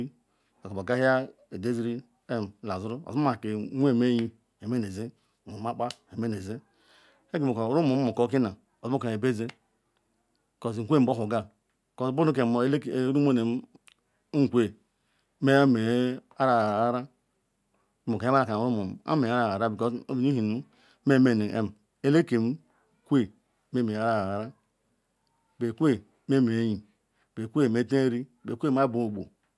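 No technical faults can be heard anywhere in this speech recording, and the signal stays continuous and steady throughout.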